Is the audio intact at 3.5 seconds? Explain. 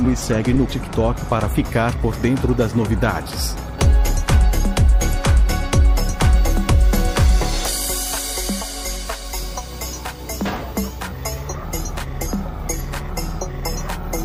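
Yes, at 3.5 seconds the audio plays through cleanly, with no dropout, click, distortion or other fault to be heard at that point.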